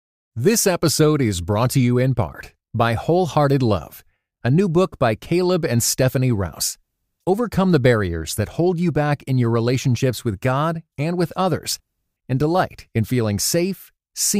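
No technical faults can be heard anywhere in this speech recording.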